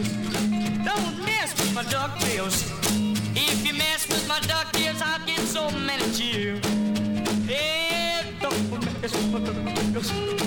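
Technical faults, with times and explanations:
1.30 to 4.86 s, pre-emphasis left on: the treble was lifted before storage and the matching de-emphasis never undid it, so the top end stands about 8 dB higher at 10 kHz than at 1 kHz, a shelf shape that fits the CD 50/15 µs curve. The sound turns thin, bright and hissy. On a spectrogram the band above about 3 kHz brightens abruptly for that span; the waveform looks spikier, with sharper transients.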